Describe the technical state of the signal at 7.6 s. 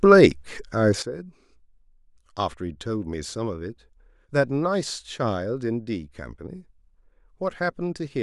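A sudden gain jump at 1.02 s is still in effect at 7.6 s, holding the speech and its background noise together about 11 dB lower to the end. The step arrived with no ramp, likely a gain setting or bit shift applied instantly.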